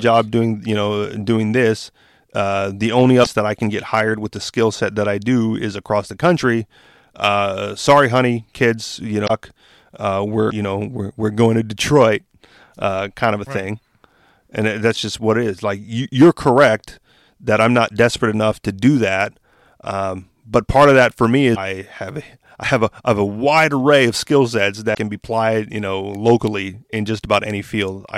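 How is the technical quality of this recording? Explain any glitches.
The speech is marred by five brief bursts of damaged data in a compressed stream, at 3.20, 9.24 (after "sorry honey kids you"), 10.46 (before "know we're we're going"), 21.51 (after "of that for me") and 24.91 s, each about 50 to 70 ms long. Corrupted bytes make the decoder misread frames and lose sync until it finds the next header.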